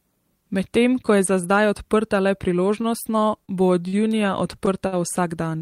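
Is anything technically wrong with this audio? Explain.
Yes. From 2.63 to 3.5 s there are repeated stalls (stutter): the jitter buffer kept running dry, so five gaps totalling 86 ms (longest 31 ms) were filled by stretching the preceding sound. The result drags and stutters, and the spectrogram shows smeared, repeated frames.

Short stalls from a late packet occur at 3.88 s (48 ms) and 4.87 s (53 ms). Each time the buffer emptied, the last sound was held until the packet arrived, producing a brief buzzy hold visible as a flat, repeated stretch in the waveform.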